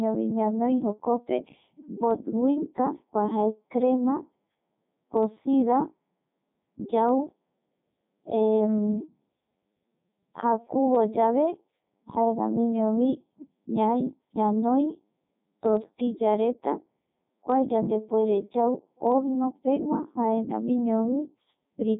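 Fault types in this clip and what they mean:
Codec 2 vocoder: the speech is rebuilt from pitch, voicing and a spectral envelope rather than the real waveform, so it comes out heavily robotic and buzzy, with nothing above 3.8 kHz. The damage fits Codec 2's top 3.2 kbit/s mode.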